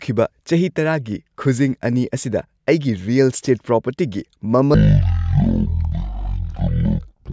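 Speech that drops abruptly at 4.74 s and stays that way to the end: from there it crawls at about a third of its speed and sits roughly 17.6 semitones lower, deep and dragging. This is a wrong sample rate fault. The samples are played back without conversion at a rate slower than they were recorded at, so speed and pitch fall together. The 0.363 ratio fits 44.1 kHz material played at 16 kHz.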